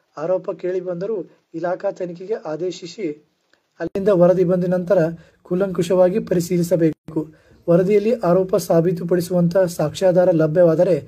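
From the start to 3.95 s, the input was likely switched to a poorer device. Nothing is heard above 7.6 kHz, the level sits around 5 dB lower, and a noise floor roughly 45 dB down appears, so the sound turns dull, with an 80 ms silence at the switch.

At 6.93 to 7.08 s there is a gap at a join of encoded pieces. Separately encoded sections were spliced without trimming the encoder's start delay and end padding, leaving a 157 ms hole with smeared edges before the sound resumes where it stopped.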